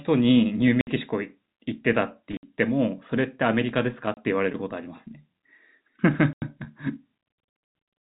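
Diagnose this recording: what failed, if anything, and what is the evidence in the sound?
Network stage: packet loss filled with silence. The speech drops out at 0.81, 2.37, 4.14 and 6.33 s. Gaps of 30 to 90 ms suggest 30 ms packets.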